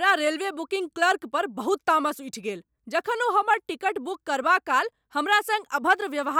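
Speech, with no audible technical fault anywhere in the recording.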